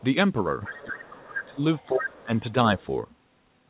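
Speech clip where the other side's voice leaks through at 0.63–1.06, 1.25–1.46 and 1.78–2.01 s (roughly 10 to 15 dB under the talker), then faintly at 2.19–2.52 and 2.79–2.85 s, likely loudspeaker echo the canceller missed. Speech is suppressed in double talk from 0.84–1.61 s and 1.89–2.55 s, dipping by something like 25 to 30 dB, likely the canceller ducking both voices while the far end talks.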